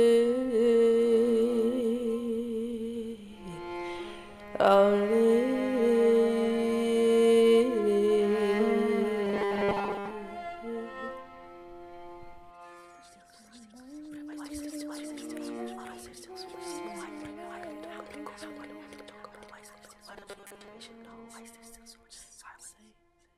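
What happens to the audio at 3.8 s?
Nothing goes wrong at 3.8 s: the audio there plays through intact, with no dropout, click, distortion or other fault.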